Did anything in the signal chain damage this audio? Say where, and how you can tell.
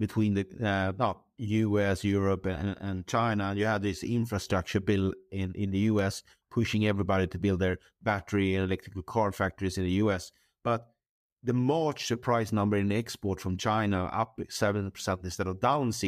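Yes, CD scratch ticks at the disc playback stage: four very brief clicks from 5.58 to 5.99 s, the longest about 1.5 ms, spaced evenly, once per disc revolution, where a blemish overwhelmed error correction. Waveform shows isolated brief gaps or smoothed dips; the spectrogram, thin full-band vertical lines.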